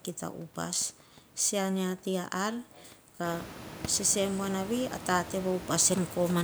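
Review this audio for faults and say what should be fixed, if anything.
Nothing to fix: the only thing of note is the room's own background noise, which rises by about 18 dB at roughly 3 s and stays about 15 dB below the speech, so it belongs to the recording space rather than the system.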